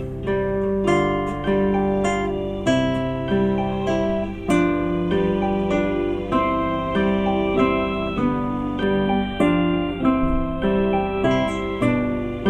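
From 8.83 s to 11.31 s, the sound turns thin and hollow. This is channel delay with comb filtering. One channel arrives a tiny fraction of a millisecond late, around a handful of samples. When the two channels fold to mono, shared content cancels at regular frequency intervals. The first deep notch sits near 5 kHz, with further notches spaced above it. The upper treble loses its sheen, leaving a dulled, phasey top end until 11.31 s.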